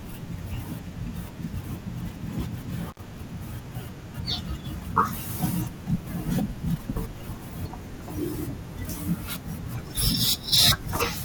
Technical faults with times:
2.89-2.99 intermittent contact

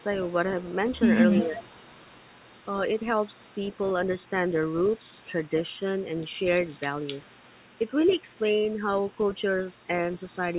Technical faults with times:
0.21-0.90 echo leak
1.42-1.64 speech suppressed in double talk
1.61-2.67 echo leak
2.98-5.49 echo leak
5.17-5.31 speech suppressed in double talk
6.00-6.27 echo leak
6.66-10.58 echo leak

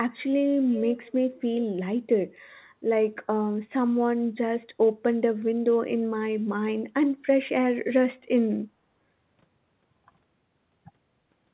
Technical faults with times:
0.69-1.13 echo leak

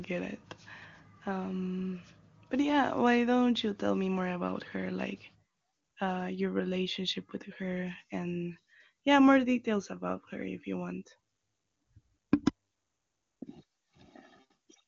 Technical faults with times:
none

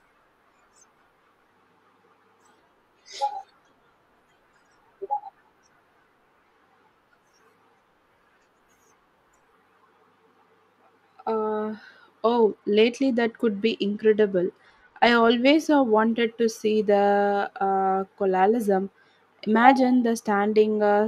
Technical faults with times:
12.44-15.56 Bluetooth SBC bit pool drop

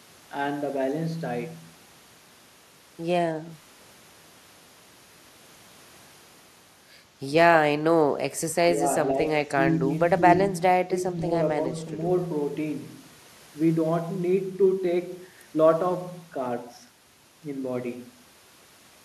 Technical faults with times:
0.74-18.43 clock drift buffer slips
8.74-8.85 speech suppressed in double talk
9.46-9.88 speech suppressed in double talk
10.19-11.19 speech suppressed in double talk

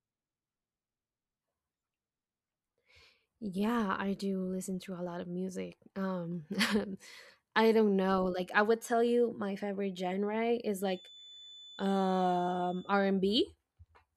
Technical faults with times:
10.76-12.98 feedback whistle

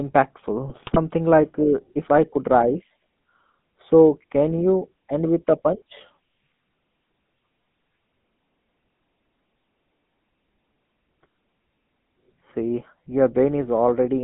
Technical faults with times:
0.00-14.23 GSM full-rate codec
0.67-0.99 GSM bit errors

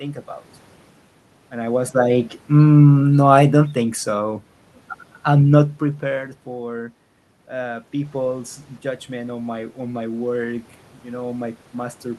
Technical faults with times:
2.64-4.19 automatic gain falling

